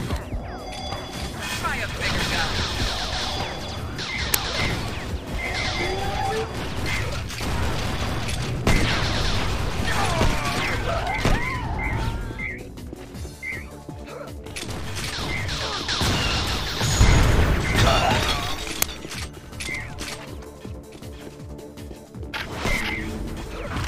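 Two uninitialised buffer bursts interrupt the sound at 4.34 s and 18.82 s, each a loud 5 ms crack from leftover memory played as samples, not the silence a dropout leaves.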